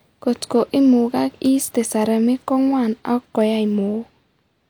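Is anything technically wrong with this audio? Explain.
No, nothing technically wrong can be heard here.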